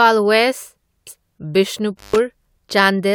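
Damaged data in the compressed stream appears at about 1.07 s. Part of the encoded speech there is corrupt, so the decoder misreads those frames, loses sync and hunts for the next valid header. The result is a brief glitch.

An intermittent contact follows between 1.97 and 2.18 s. A loose connection opens for roughly 117 ms, cutting the speech out with crackle at each edge. Faint hiss remains while the line is broken, and then the signal returns.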